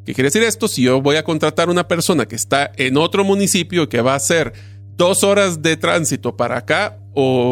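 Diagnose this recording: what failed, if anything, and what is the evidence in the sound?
The analogue wiring is the weak point here: there's mains hum running under the speech for the whole clip, a steady 50 Hz drone sitting roughly 20 dB below the talker. That points to a ground loop or a transformer nearby bleeding the power line into the signal path.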